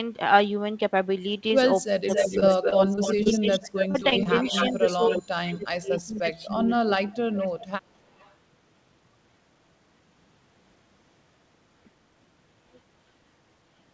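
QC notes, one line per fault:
1.86–7.34 s, speech suppressed in double talk: the voice keeps dipping, by about 30 dB at its deepest, for roughly three seconds in total across this stretch. It's likely the echo canceller couldn't tell the talker from the loudspeaker echo during double talk and turned both down.
2.09–5.21 s, 6.00–6.19 s, 7.33–7.67 s, 8.18–8.34 s, echo leak: a delayed copy of the voice trails behind it, 271 ms late in the first two and 316 ms late in the last two. In the long first stretch it's about as loud as the speech, then around 15 to 35 dB down. This is likely loudspeaker pickup the far end's canceller let through.
2.40–3.27 s and 3.91–4.27 s, repeated packet loss (robotic sound): each run has a handful of quick holes of up to 22 and 26 ms, patched by stretching the last bit of sound. That gives a choppy texture with pieces missing, with concealment covering 8% and then 22% of each run. 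The call codec leaves nothing above 8 kHz throughout.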